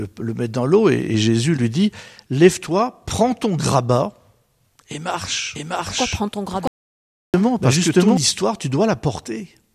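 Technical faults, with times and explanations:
5.55 to 8.17 s, doubled audio track: the speech is suddenly joined by a second copy of itself trailing about 0.7 s behind and roughly as loud as the original, so every syllable seems to repeat over the next. The echo is full-band and dry, with no room colour or fade, and it begins and ends abruptly. This likely comes from the same signal reaching the mix twice, once through a slower capture path or an edit that left two copies out of step.
6.67 to 7.34 s, audio dropout to silence: partway through the doubled passage the sound cuts off completely for about 0.66 s and then resumes mid-flow. The gap is silence with no room tone or hiss underneath, and whatever was spoken in that span is simply missing. The abrupt cut to silence points to the input signal being lost while the recorder kept writing empty samples, likely through a disconnected device, a failed link or a brief mute.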